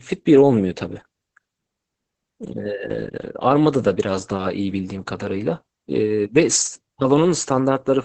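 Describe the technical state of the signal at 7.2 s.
At 7.2 s, as throughout the clip, the speech sits behind Opus voice compression running a linear-prediction (SILK-style) coder at what sounds like about 10 kbps. The band is held to roughly 8 kHz and the excitation is coded coarsely, leaving it muffled, hoarse and faintly robotic.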